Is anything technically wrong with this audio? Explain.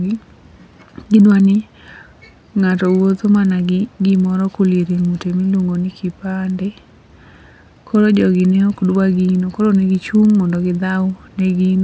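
Yes. Throughout the speech, the resampler restarted on every block. Each 50 ms block was converted from 48 kHz to 16 kHz in isolation, so the filter at each edge lacked the true neighbouring samples and left a small discontinuity. These arrive 20 times a second, heard as a buzz riding on the speech that vanishes in pauses. A spectrogram shows thin vertical lines every 50 ms during sound; the waveform shows tiny steps at those boundaries.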